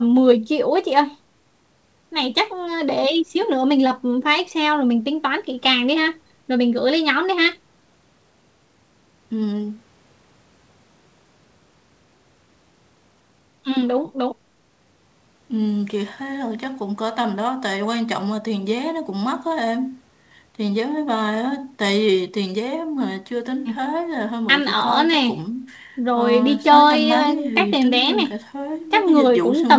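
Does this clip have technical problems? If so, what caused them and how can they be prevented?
No, there's nothing wrong to fix here: it's speech that has been through a call's microphone processing and a G.722 link at 64 kbps, so the top end stops at 8 kHz, which is just what that path does.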